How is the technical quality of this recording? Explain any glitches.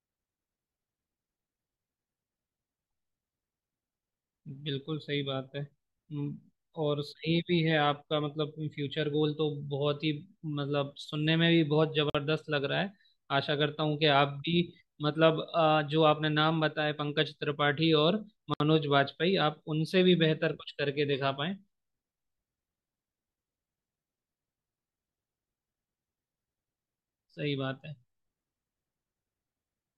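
The recording has two short dropouts in the speech, both from the same fault. A gap at a join of encoded pieces occurs at 12.10 to 12.15 s (47 ms) and at 18.54 to 18.60 s (65 ms). Separately encoded segments were spliced without removing the encoder's start-up delay and end-of-stream padding, so that silence remains at each seam. You hear the speech stop abruptly, with edges softened by the codec, then resume exactly where it broke off.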